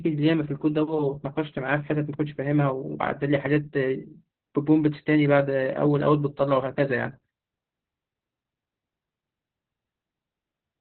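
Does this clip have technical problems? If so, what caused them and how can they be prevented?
Yes. Opus voice compression throughout: speech sounds muffled, hoarse and slightly robotic, and a spectrogram shows nothing above 4.2 kHz, which fits narrowband SILK coding at roughly 8 kbps. To prevent it, give Opus a higher bitrate so it keeps a wider band and finer excitation detail.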